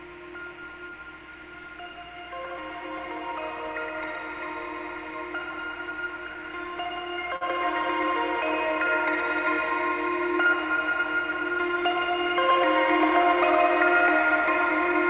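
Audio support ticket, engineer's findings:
Short stall from a late packet at 7.36–7.43 s. A sound is held about 51 ms too long, with a faint buzz or dip. Jitter buffer ran dry and the receiver stretched the last audio. Playback resumed in place with nothing lost, 51 ms later. Call path shows the G.711-style band limit at 4 kHz.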